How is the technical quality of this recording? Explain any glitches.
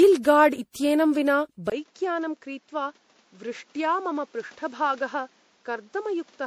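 The recording is poor. Lossy damage runs through the whole clip, and the sound quality drops sharply just before two seconds in.

Generation loss is present from start to finish. The speech sounds swirly, smeared and hollow. Consonant onsets are blurred. This is worse than a single low-rate encode would give. The likely cause is about seven rounds of MP3 encoding, with the character fitting 64 kbit/s. Each pass quantises on a shifted frame grid. So noise and spectral holes pile up.

An input switched to a poorer device at 1.70 s, and the change lasts to the end. There is a brief gap of about 20 ms at the switch. After it, nothing is heard above 7.6 kHz, so the speech turns dull and boxy. The level falls by about 10 dB. A new noise floor appears roughly 30 dB under the speech. A change of microphone or headset profile is the likely cause.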